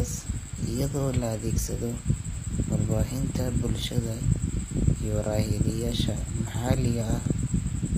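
Speech throughout, and the whole thing carries plainly audible HE-AAC compression damage, likely from a low-bitrate stream somewhere around 24 kbps. The top end sounds synthetic: the treble is rebuilt by copying lower bands upward, so its harmonics don't line up with the real ones below the crossover, and the s sounds come out gritty and lispy. Above 15.4 kHz there's simply nothing at all.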